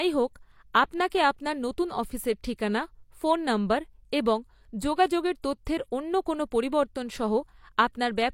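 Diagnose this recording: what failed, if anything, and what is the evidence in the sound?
Pre-echo at about 5.42 s is a codec-stage failure. A short hiss arrives roughly 19 ms ahead of a sharp onset in the speech, and the attack itself sounds softened rather than crisp. The transform codec quantised a whole block at once, so noise sized for the loud onset was spread back across the quiet stretch before it, where nothing could mask it. That smear just ahead of the transient is the evidence.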